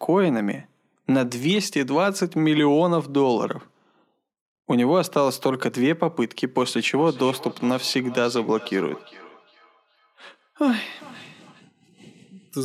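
From 6.69 to 11.67 s the speech returns in faint repeats roughly every 0.4 s, about 20 dB down: feedback echo between two devices, one's loudspeaker re-entering the other's microphone.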